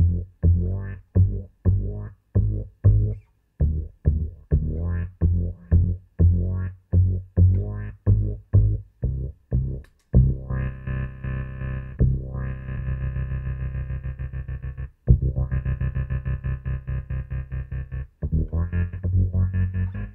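No dropouts, distortion, timing errors or other technical faults can be heard anywhere in the recording.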